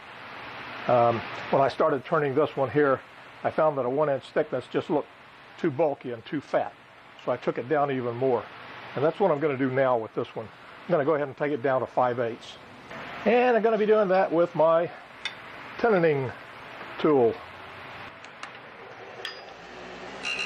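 A drift correction step twice shifted the playback rate, likely from clock-matching software adjusting its buffer. From 13.05 to 14.06 s the sound runs 6.2% fast and rises 104 cents; from 18.67 to 20.07 s it runs 6.2% slow and drops 111 cents, then snaps back.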